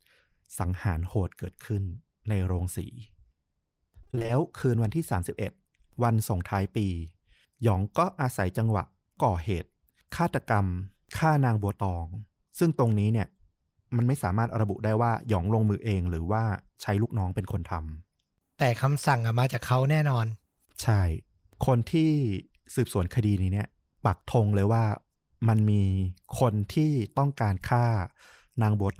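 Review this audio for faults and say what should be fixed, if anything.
Repeated packet loss (robotic sound) from 4.03 to 4.30 s: seven short dropouts, each up to 20 ms, patched by stretching the last sound, so about half that stretch comes out choppy and robotic. To prevent it, fix the unstable network path and give the jitter buffer more headroom.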